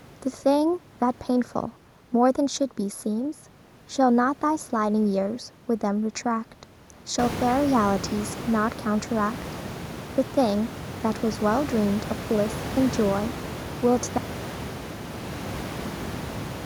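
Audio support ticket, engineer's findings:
Channel delay (comb filtering), whole clip: hollow, phasey speech. One channel arrives late by roughly 0.15 ms before the mono sum, so notches sit at fixed, evenly spaced frequencies starting around 3 kHz.

Audio dropout to a faint residue at 14.18 s, lasting to the end: speech cuts off abruptly, leaving only faint sound around 40 dB down. Likely an upstream signal loss with the downstream path still live.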